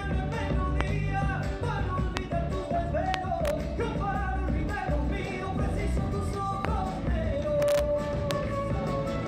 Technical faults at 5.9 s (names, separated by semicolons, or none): none